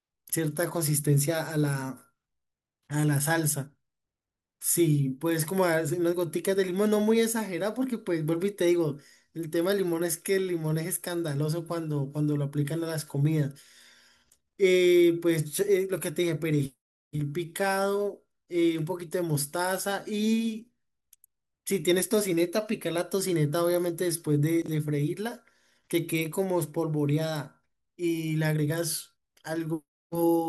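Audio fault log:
24.62–24.68 s, chunks out of order: a 20 ms chunk plays two chunks late, jumbling this moment and leaving three hard joins.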